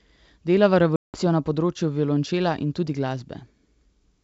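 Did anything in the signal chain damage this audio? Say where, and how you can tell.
Yes, at the network stage: packet loss on an ADPCM call, from 0.96 to 1.20 s. About 180 ms, roughly ten packets' worth, is replaced by silence, a hard-edged flat gap in the waveform and a blank vertical band on the spectrogram. At "na področju violončela in" the decoder's predictor and step size no longer match the sender's, so the sound returns slightly distorted before settling.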